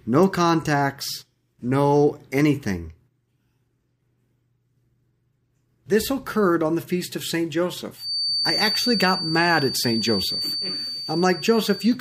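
From 7.94 s to the end of the clip, a feedback whistle sits behind the speech: a thin, steady tone at one pitch, 4.6 kHz, running a few dB below the speech and swelling and fading slowly in level. The likely cause is a loudspeaker-to-microphone loop operating just short of instability, so that a single high frequency keeps ringing at low level rather than building into a full howl.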